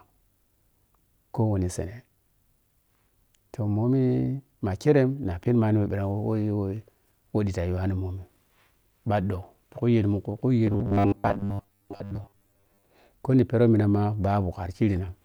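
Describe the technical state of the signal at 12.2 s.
At 12.2 s the speech sits inside robotic sound from repeated short buffers, spanning 10.67 to 12.83 s after "khu yel mun khu". A 10 ms slice is looped, likely because incoming audio lags, so most of the span becomes a rigid metallic 100 Hz buzz.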